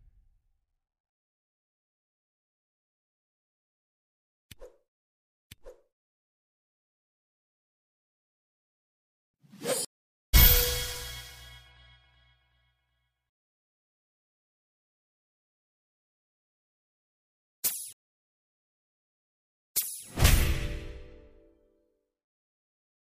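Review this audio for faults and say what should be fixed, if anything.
Two stream reconnects, where the connection dropped and a fresh decoder picked up mid-stream. From 9.85 to 10.35 s there's a 485 ms silence, and the audio resumes roughly 0.4 s ahead. From 17.93 to 20.05 s there's a 1.56 s gap, and the audio jumps back 557 ms. A bigger client buffer with seamless resume on reconnect would cover these dropouts.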